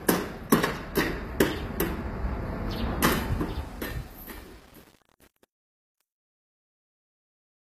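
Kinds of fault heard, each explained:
HE-AAC compression: The audio is plainly coded at a low bitrate, likely HE-AAC. Treble is rebuilt from lower bands and sounds gritty and metallic. Nothing reaches above 15.5 kHz.
Truncation distortion on a fade: From 3.14 s to the end the fade-out breaks into coarse steps, as if only 8 bits remain. The tail sounds gritty.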